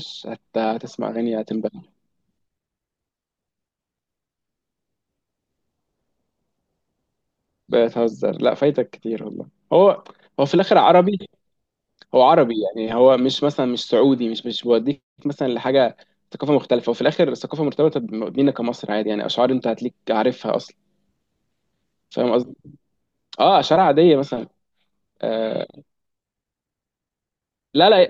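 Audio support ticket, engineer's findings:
No audible faults found.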